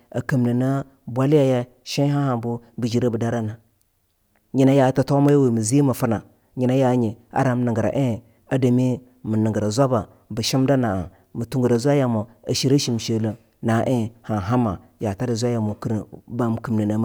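Speech, with one electrical switching spike at 5.29 s, just after "nyina yaa". It is a sharp snap peaking near -15 dBFS, likely from a nearby switch arcing.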